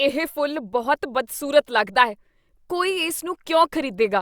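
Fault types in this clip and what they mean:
Nothing here needs flagging; the speech comes through without any technical faults to list.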